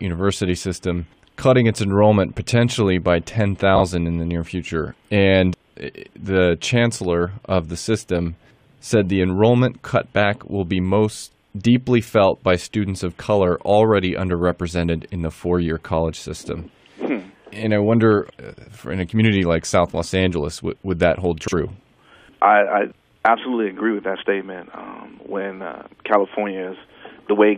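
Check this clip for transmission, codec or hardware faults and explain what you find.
One transmission fault turns up three times: frames out of order, at 3.75 to 3.81 s, 18.52 to 18.68 s and 21.43 to 21.53 s. Adjacent runs of coded frames arrived swapped and were decoded as received. Each swapped block lasted 23.2, 69.7 and 46.4 ms, which fits frames of about 23 ms. Each stretch plays with its halves exchanged, giving a brief garbled flutter. No time is lost.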